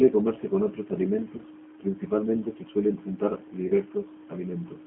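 The whole recording passes through a G.729 codec whose sound points to the 8 kbit/s G.729A variant. It rebuilds speech from a filter model and a few pulses per frame, the line is confined to 200 Hz to 3.4 kHz and the voice sounds plainly rough and synthetic.

Packets then go missing twice, and the decoder fills the gaps by extrapolating from its last frame at falling gain. From 1.38 to 1.42 s, between "comerse con otros" and "principalmente se suelen untar", a brief stretched smear fits about 10 ms of lost audio. From 3.67 to 3.73 s, after "principalmente se suelen untar", a longer fading stretch fits about 30 ms lost, and the voice stays weak briefly afterwards.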